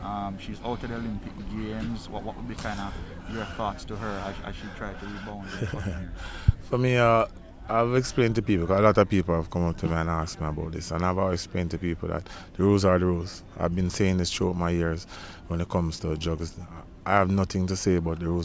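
No technical faults can be heard anywhere in this audio.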